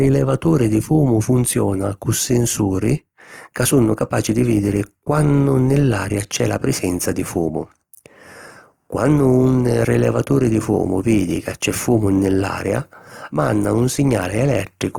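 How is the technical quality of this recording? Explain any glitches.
The recording is compromised by lossy compression that runs through the whole clip. The cause is likely Opus compression in its music-oriented mode at a low bitrate, roughly consistent with 24 kbps. Short of bits, the encoder fills bands with folded or noise-like content rather than leaving holes, so the full-bandwidth speech sounds plainly rough, grainy and noisy instead of swirly.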